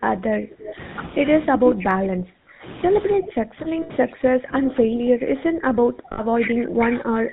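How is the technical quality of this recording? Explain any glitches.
Quality is poor. The whole recording carries codec coloration, and on top of that the talker is repeatedly pushed down, with brief echoes and two short dropouts.

GSM full-rate codec: Throughout, the sound has the buzzy, gravelly grain of the 13 kbps GSM full-rate codec. It rebuilds the voice from a vocal-tract filter driven by sparse, regularly spaced pulses, so fine detail turns rough. Nothing above 4 kHz survives, leaving a narrowband, muffled top.

Speech suppressed in double talk: From 0.0 to 0.79 s, 1.48 to 2.72 s, and 3.06 s to the end, the level sags by up to about 25 to 30 dB and the voice thins or breaks up. The likely cause is an echo canceller that could not separate this talker from the far-end echo while both spoke, so it attenuated everything.

Echo leak: At 0.66 to 0.73 s and again at 3.26 to 3.31 s, a faint scrap of the voice returns about 327 ms late, roughly 15 dB below the direct sound. 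This is likely loudspeaker pickup on the far side that its canceller failed to remove and sent back.

Lost GSM frames: At 3.82 to 3.91 s (80 ms, which fits four 20 ms frames) and at 6.12 to 6.21 s (60 ms), the sound freezes into a brief metallic ring. The decoder is repeating the last good frame's parameters to conceal the corrupted frames.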